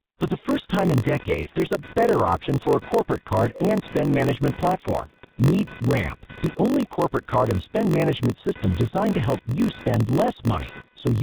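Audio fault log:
throughout, G.723.1 codec: the speech is squeezed to about 6.3 kbit/s in 30 ms frames, with nothing above 4 kHz, so it sounds heavily muffled and hoarse, with smeared consonants.
throughout, block size mismatch (padded): each block arrives short of the 1024 samples read and is zero-padded, giving a 46.9 Hz buzz and playback slowed to 0.938 times with the timbre kept.
0.47–11.23 s, computer activity noise: a pulsing interference near 500 Hz, roughly 20 dB below the speech, rides on the audio as machine load shifts the shared ground.
1.43–1.50 s, VoIP packet loss concealed by the speech codec: one 30 ms frame is missing, and the decoder stretches the previous frame into a fading buzzy tone or coloured noise.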